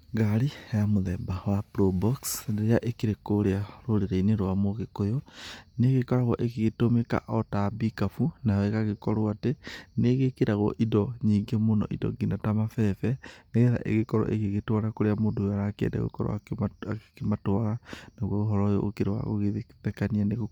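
From start to finish the speech carries a breathy, grainy edge, with the codec damage plainly audible, though the band still reaches about 20.2 kHz. This is likely Bluetooth LC3 compression: the transform codec drops much of the high-frequency detail and substitutes shaped noise. The texture points to 10 ms frames at roughly 48 kbps.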